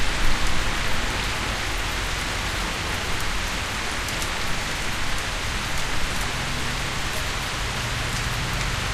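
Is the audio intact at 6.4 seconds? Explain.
Yes, the audio at 6.4 seconds is intact, with no dropout, click, distortion or other fault at that moment.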